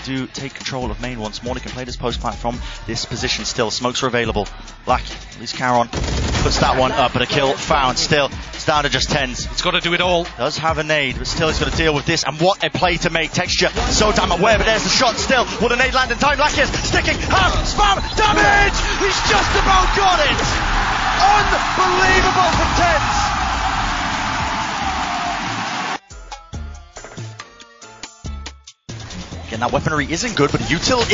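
From start to finish the sound has a watery, swirling texture, with metallic chirps on sibilant-like and bright transients and softened, smeared attacks. This is likely MP3 compression at a very low bitrate, around 32 kbps: starved of bits, the encoder lets weak frequency components flicker on and off between frames. A plain low-pass filter would dull the sound without that shifting, bubbling artefact.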